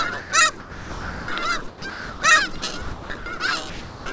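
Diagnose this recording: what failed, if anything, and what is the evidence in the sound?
The sound gives way to steady, flat noise at 0.20 to 0.32 s, 0.60 to 1.28 s and 3.70 to 4.06 s, then resumes. The middle gap loses about 620 ms of sound. This is likely sound dropped by the voice detector in call processing, with comfort noise filling each gap.

From 1.68 to 2.22 s and from 2.58 to 3.40 s the sound turns choppy. Each stretch has two or more holes, with 460 ms and 420 ms replaced. The sender likely switched transmission on and off repeatedly. This is sound chopped by the voice detector, heard within the G.722 band, which stops at 8 kHz.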